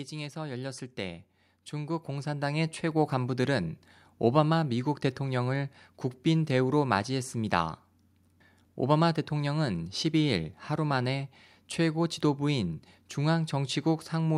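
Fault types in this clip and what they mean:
Automatic gain rising: from about 0.33 s to 3.49 s the speech and the background underneath it swell together, climbing by roughly 11 dB over those three seconds rather than jumping at once. This happens when an automatic gain control judges the incoming level too low and slowly turns up its amplification. Because it boosts the whole signal, the noise floor rises in step with the voice instead of the voice alone getting louder.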